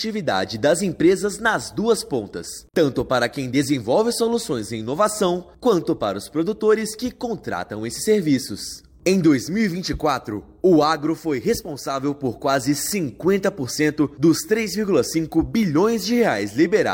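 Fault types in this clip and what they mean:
No technical faults can be heard anywhere in this clip. No working path is described to comment on beyond that.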